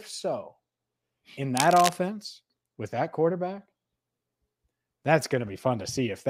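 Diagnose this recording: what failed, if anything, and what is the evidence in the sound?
Between 1.56 and 1.93 s there's a burst of cable scratch noise, dense uneven crackle sitting only a little below the speech level. It points to the analogue wiring, most likely a worn cable or connector being moved so its contact resistance jumped around.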